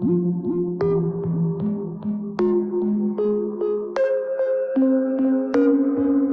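No technical faults are audible.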